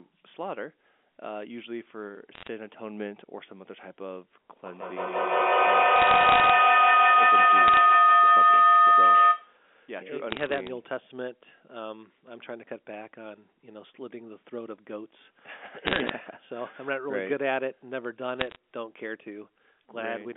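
Short bursts of sharp ticking and crackle break over the telephone-band speech at 2.35–2.48 s, 5.96–6.50 s, 7.68–7.77 s, 10.30–10.68 s, 15.87–16.10 s and 18.40–18.56 s. These are bit errors on a digital phone line. Flipped bits on the G.711 A-law link corrupt single samples, at an error rate of a few tenths of a percent. Where a flip lands on a sign or high-order bit, that one sample jumps and clicks.

From 4.65 s to 9.62 s a tone near 1.5 kHz swells into a feedback howl, peaking about 11 dB above the speech and pulsing roughly every 150 ms. Two call devices in one room form a loop from microphone to loudspeaker and back. The loop adds gain each round trip, so the repeats grow instead of dying away. They narrow onto the frequency the loop favours until the loop is broken.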